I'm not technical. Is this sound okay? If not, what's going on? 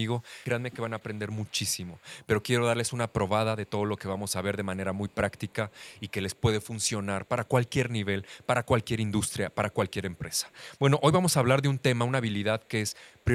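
No. There is an echo leak. A very faint copy of the speech comes back about a quarter of a second late (260 ms). It appears from 0.19 to 2.43 s, 3.09 to 3.13 s, 3.66 to 4.32 s, 4.97 to 7.72 s, 8.27 to 10.65 s, 11.77 to 11.82 s and 12.6 to 13.25 s. The likely cause is a loudspeaker on the other end. Its echo canceller missed part of the sound and sent it back.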